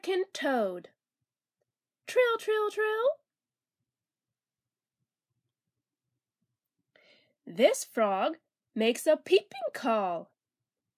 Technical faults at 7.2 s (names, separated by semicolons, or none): none